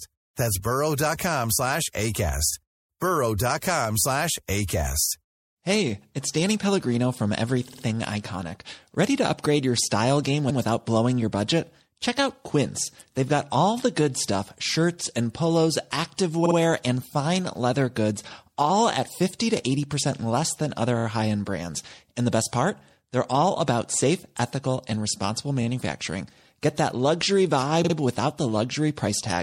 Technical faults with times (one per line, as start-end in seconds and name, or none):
0.00-29.42 MP3 compression
7.67-7.83 repeated frames
10.49-10.60 repeated frames
16.45-16.55 repeated frames
20.97-21.04 repeated frames
27.84-27.94 repeated frames